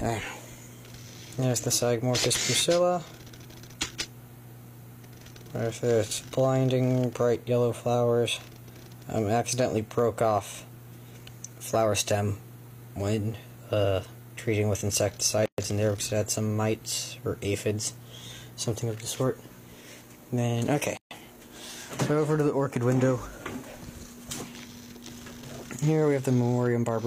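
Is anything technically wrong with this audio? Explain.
Yes. The audio was encoded in separate pieces and joined without trimming each encoder's start-up delay and last-frame padding, leaving gaps at the joins. The sound stops for about 126 ms at 15.46 s and about 137 ms at 20.97 s, with smeared edges, then resumes where it stopped.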